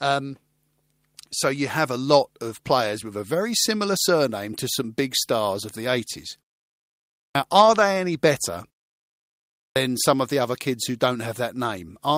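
At 7.27 s, after a pause of about 0.93 s, the speech comes in abruptly, its opening sounds missing as if cut off with a knife. This is a clipped start after a pause: the output device dropped into a sleep state during the silence and needed about 82 ms to wake and lock again, so that first slice of sound was never played. The same thing happens at 9.66 s, where about 100 ms vanishes after a gap of roughly 1.03 s.

From 7.61 to 7.83 s the sound turns briefly grainy and hissy, a rough patch rather than a dropout. This is a lost packet rebuilt from error correction. Several separate packets went missing, which fits about six 20 ms frames, and the decoder filled roughly 120 ms from the low-bitrate backup copies carried in the packets that followed. The stream keeps flowing, but those frames are coarser and noisier than the audio around them.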